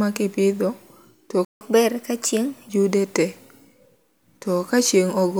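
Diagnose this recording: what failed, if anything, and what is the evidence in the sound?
The speech cuts to silence at 1.45 s and resumes at 1.61 s, a gap of about 0.16 s, before picking up where it left off. This is a playback stall, likely caused by the player's buffer running dry or its output thread being blocked.

From 1.61 s to 2.69 s the speech runs at 1.15 times normal speed, with pitch raised by about two semitones, then settles back. This is catch-up at higher speed: the player resamples its backlog faster to recover the lost time.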